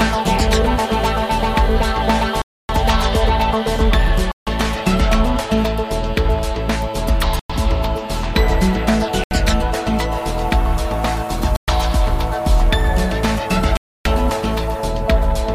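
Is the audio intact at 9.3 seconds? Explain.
No. A Bluetooth stall cuts the sound to clean silence from 9.24 to 9.31 s, likely from interference draining the headphones' buffer, a clean gap rather than crackle.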